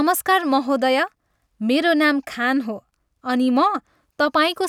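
No technical faults can be heard anywhere in the speech.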